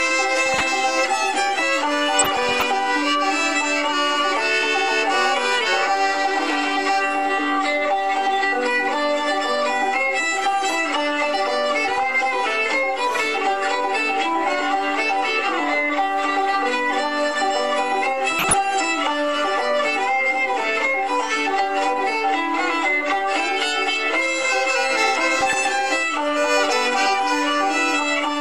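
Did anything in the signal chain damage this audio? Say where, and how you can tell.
Yes, there is DAB burbling, introduced in reception and MP2 decoding. Six bursts of burbling sit over the sound at 0.45–0.63, 2.14–2.63, 11.88–12.00, 18.32–18.55, 25.41–25.67 and 27.09–27.15 s. Weak reception let a small fraction of bits, well under one percent, slip past error correction. Corrupted samples then put short blips of noise in single sub-bands. The burst lengths point to a few to a couple of dozen frames.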